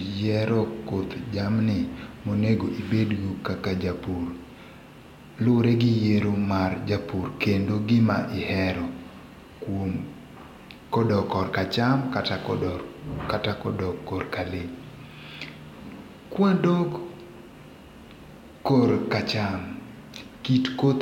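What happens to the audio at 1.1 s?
Nothing goes wrong at 1.1 s; the speech carries on intact through that moment.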